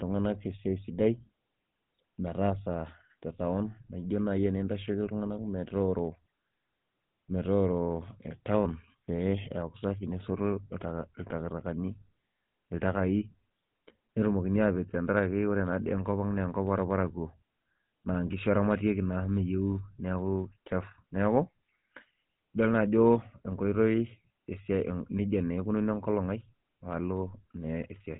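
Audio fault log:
Throughout: GSM full-rate codec. The speech carries a plainly audible buzzy, gravelly roughness, and nothing survives above 3.8 kHz. A vocal-tract model drives sparse pulse excitation that discards most of the fine signal detail, consistent with a 13 kbps full-rate coder.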